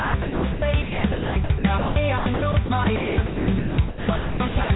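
From 0.0 to 4.7 s the audio keeps dropping in and out, with roughly 2.7 s of it swapped for synthetic noise. That's likely sound chopped by the voice detector, which gates the sender off and fills the gaps with comfort noise, all heard through a band that stops at 4 kHz, consistent with a G.711-style call path.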